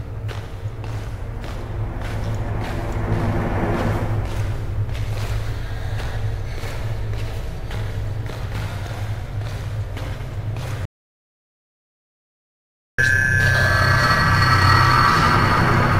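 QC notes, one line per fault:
10.85 to 12.98 s, audio dropout to silence: the input feed was most likely lost for about 2.13 s, through a disconnected device, a failed link or an accidental mute, while recording or encoding carried on writing silence. The sound breaks off abruptly mid-flow and resumes just as suddenly, and the gap between is silent with no room tone. Whatever sounded during those two seconds is gone.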